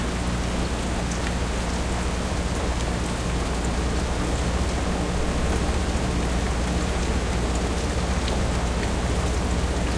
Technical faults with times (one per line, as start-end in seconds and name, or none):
none